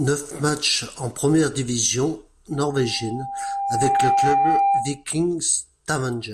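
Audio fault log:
2.55 to 5.04 s, loudspeaker feedback squeal: a steady tone near 795 Hz creeps in and swells over roughly a second and a half until it sits a few dB above the speech. The mic is hearing its own speaker, and at that one frequency the loop gain tipped past unity, so the tone keeps feeding itself and climbs until something holds it back. Then it ends.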